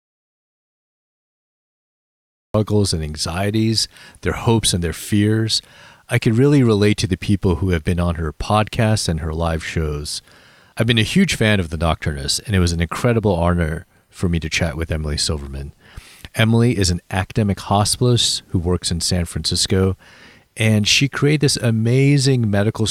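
The clip is speech, and it opens in an audio dropout to silence that is already under way at the start and runs until 2.54 s, where the sound enters abruptly mid-phrase with "and anxieties their hopes". The gap is silent with no room tone at all, which points to the input likely having been lost, through a disconnected device, failed link or mute, while the recorder kept writing silence. Whatever preceded that phrase is not recoverable.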